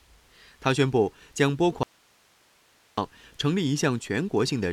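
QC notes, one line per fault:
1.83–2.98 s, audio dropout to a faint residue: the speech cuts out abruptly for about 1.14 s, leaving only hiss roughly 35 dB below the signal, likely a lost feed with the downstream path still live; the instant cut and steady hiss distinguish it from a pause or fade.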